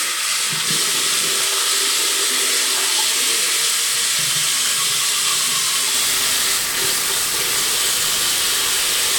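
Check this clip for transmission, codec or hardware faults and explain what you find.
One fault appears in the final stretch. From 5.94 s to the end at 9.18 s, low bit depth without dither, likely from the signal being rounded to just 3 bits with no dither. The error tracks the sound and sits only a little below it, making everything coarse and grainy, with the quietest moments sputtering or dropping out.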